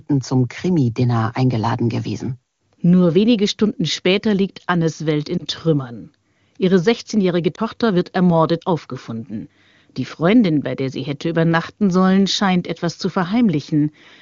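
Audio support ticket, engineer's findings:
Lost AMR speech frames, one at a time: brief dip/warble at 5.38–5.43 s and at 7.55–7.60 s, just before "wird ermordet aufgefunden". Decoder masking a single failed 20 ms frame by repeating the last pitch and envelope at reduced gain. Spectrogram: short smeared harmonic patch. Waveform: small amplitude notch. Surrounding AMR-WB audio clean, 6.4–7 kHz band noise-filled.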